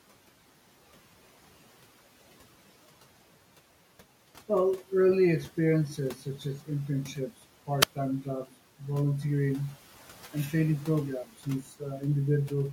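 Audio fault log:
7.79–7.90 s, wireless microphone squelch dropout: the radio link fades, the receiver mutes for about 65 ms, so you get a quick hiss, a gap, then speech back.
11.63–11.81 s, speech cut by the noise suppressor: it mistakes soft speech for background and pulls it down by about 7 dB for roughly a tenth of a second, so it sounds swallowed.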